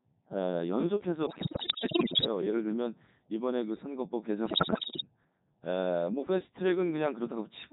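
Codec 2 vocoder processing runs through the whole speech clip. Only pitch, voicing, energy and a coarse spectral envelope survive, and the decoder rebuilds the voice from sine waves, so it sounds robotic and buzzy, with heavy damage even at what sounds like the codec's top 3.2 kbit/s rate.

Bit errors on digital voice radio strike from 1.26 to 2.28 s and again from 4.46 to 5.07 s. Roughly one bit in five is corrupted, and each bad frame gets wrong pitch, level, voicing or spectrum, so the voice lurches between tones and breaks into warbles, bleeps and robotic gibberish.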